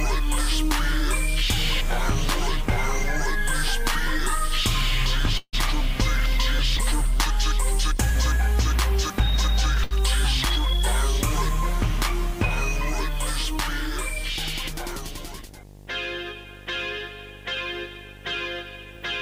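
A screen or video cable is coupling into the audio path for the whole clip, producing video or display buzz: a 50 Hz buzz locked to the picture's field rate, with harsh hash above it and a thin, very high line-rate tone at 15.6 kHz. It sits about 15 dB below the wanted signal.

From 5.37 to 5.55 s there is a call audio freeze, most likely from packets held up in transit so that the receiver's jitter buffer ran dry. The receiver bridged the 154 ms wait by carrying the last sound forward as a fading buzz or hiss that drops to about 50 ms of silence. When the audio resumes, it picks up exactly where it stopped. Nothing is lost, but a gap has been inserted and everything afterwards is 154 ms later.

At 9.84 to 9.93 s a short stall from a late packet occurs. One packet missed its playout time, the buffer emptied, and the receiver stretched the preceding sound for 72 ms until the packet turned up, then continued from the same point. 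Nothing is skipped, but that moment is held unnaturally long, and the stream falls a further 72 ms behind.

From 13.51 to 15.4 s a jitter buffer speed-up follows. The buffer had built up more audio than its target, so the receiver trimmed many tiny pitch-period slices in quick succession, removing about 40 ms in total. Playback runs at 102% speed with unchanged pitch, so the passage runs only slightly fast.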